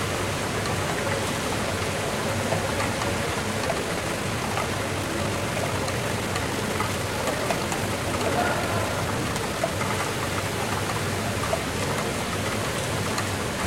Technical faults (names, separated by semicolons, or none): time-stretched section